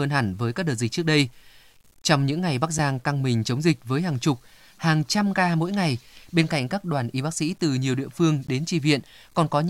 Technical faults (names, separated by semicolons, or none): low bit depth without dither; block of digital silence